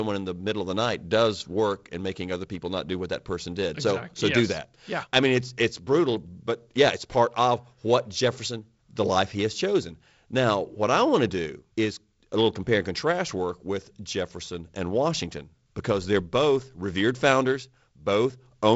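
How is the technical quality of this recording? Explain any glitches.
No glitches or technical faults can be heard anywhere in the recording. The speech comes through G.722 wideband telephone coding, with nothing above about 7.7 kHz and a light, slightly noisy coding texture in the lower band that fits the 48 kbit/s mode.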